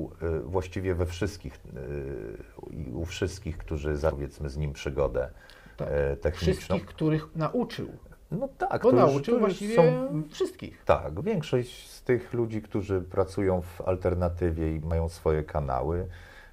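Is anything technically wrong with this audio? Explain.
Yes. Brief glitches interrupt the audio at 4.11, 11.19 and 14.91 seconds. This is damaged data in a compressed stream: the decoder hit corrupted frames, lost sync and jumped to the next readable frame header.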